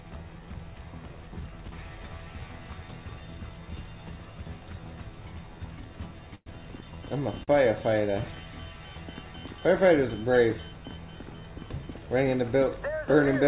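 The audio has passed through a narrowband call path, with nothing above 4 kHz, which fits a G.711 A-law codec. At 6.35 to 6.49 s there is a call audio freeze: the last sound is carried on and then falls to about 30 ms of silence, inserting 111 ms of gap before playback resumes where it stopped with nothing missing, likely from delayed packets draining the jitter buffer. At 7.43 to 7.51 s a short stall from a late packet stretches the preceding sound by 42 ms until the packet arrives, after which the audio continues from the same point with nothing lost.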